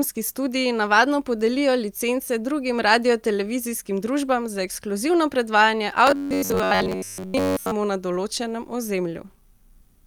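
From about 6.07 s to 7.72 s the speech goes robotic, the classic sound of repeated short buffers. Most of that stretch is a rigid, metallic buzz pinned at about 93.8 Hz that still loosely tracks the talking. That pitch points to a chunk of roughly 10.7 ms being looped, which is likely the playback side getting fresh audio too slowly and covering the gaps by replaying the last bit while the real audio is skipped.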